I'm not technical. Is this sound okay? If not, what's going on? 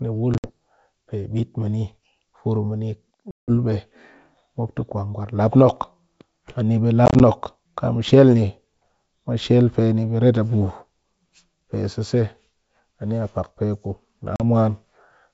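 No. This is packet loss on an ADPCM call: chunks of data went missing, leaving silent holes near 0.34–0.50, 3.31–3.51, 7.06–7.21 and 14.36–14.41 seconds. The decoder then loses track, so the speech comes back with a click, wrong loudness or brief distortion.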